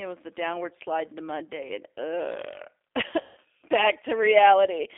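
From start to finish the speech carries the sound of the G.729 codec. The band runs from about 300 Hz to 3.6 kHz, and the coding damage is plainly audible: a rough, slightly synthetic quality consistent with an 8 kbit/s coder that models each 10 ms frame with a vocal tract filter, a pitch predictor and a few pulses. On a spectrogram, energy stops sharply above 3.6 kHz and thins below 300 Hz. Harmonics look smeared, and the waveform lacks fine detail.

From 3.21 to 3.38 s, VoIP packet loss concealed by the speech codec replaces roughly 160 ms of audio, which fits eight 20 ms packets going missing. The decoder kept extending its last pitch and filter settings at falling gain, so the sound stretches into a buzzy tone or coloured noise that fades. Because each frame builds on the previous one, the signal stays weak or distorted just after 3.38 s. A spectrogram shows the last spectrum frozen and dimming across the gap. 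The waveform shows a shrinking shape.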